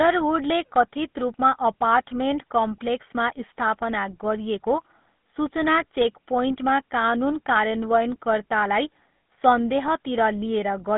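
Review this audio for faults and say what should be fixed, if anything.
Throughout the speech there is a buzzy, gravelly roughness, and the sound is confined to a narrow band from 150 Hz to 3.6 kHz, with nothing above. This is GSM full-rate codec damage. The codec models the vocal tract and excites it with regularly spaced pulses, keeping only every third excitation sample, which produces the grainy buzz. The plainly audible coarseness fits a 13 kbps full-rate stream. To prevent it, capture or route the speech over a wideband path rather than a GSM full-rate link.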